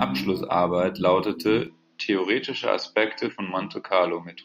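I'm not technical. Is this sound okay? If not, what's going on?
No. From 1.67 seconds to the end, the speech suddenly sounds duller and boxy, as its crisp top is lost, with no gap or loudness jump. The likely cause is an input switched to a poorer device: another microphone or a headset's call profile took over mid-recording.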